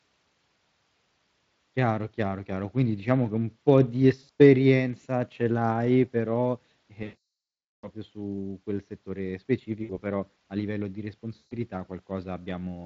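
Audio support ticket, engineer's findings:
VoIP packet loss concealed by the speech codec, Speex decoder side. Gaps at 4.23 s (140 ms lost over 160 ms, longest run 80 ms), 7.03–7.88 s (800 ms), 9.83 s (60 ms) and 11.37 s (140 ms). The decoder extrapolates the last pitch and filter with falling gain, so the sound smears into a fading buzz or coloured noise, and the speech stays weak briefly after packets resume.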